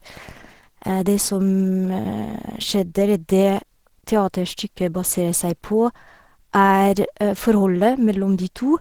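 Throughout the clip, the speech has been squeezed through a low-rate encoder, likely Opus compression working in its hybrid speech mode, with damage that fits a bitrate around 16 kbps. The band still extends to about 20.2 kHz, so the problem is not dullness from a narrowed bandwidth. The encoder runs short of bits, and the voice comes out hoarse and grainy, with a rough, noisy texture laid plainly over it.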